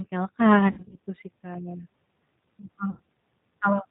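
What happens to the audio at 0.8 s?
VoIP packet loss concealed by the speech codec, 0.68–0.96 s: about 160 ms of frames drop out in runs up to 60 ms, and the decoder extrapolates its last pitch and filter, so the speech smears into a fading buzzy tone or coloured noise. Throughout, G.729 coding at 8 kbit/s leaves the voice band-limited, rough and synthetic.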